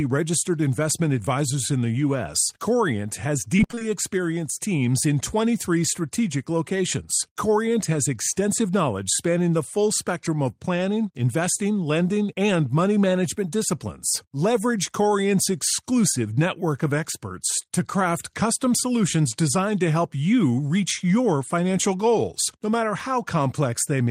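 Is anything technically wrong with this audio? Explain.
Yes, there's one problem. From 3.57 to 3.83 s, just before "experienced teams in", you get repeated packet loss with that robotic sound: seven short dropouts, the longest 21 ms, each patched by stretching the previous sound. Nearly half that stretch is filler, so it comes across choppy, with pieces missing.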